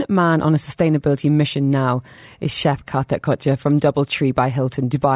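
Nothing in this recording stands out as a technical fault, so there's no problem to point to anywhere along the way.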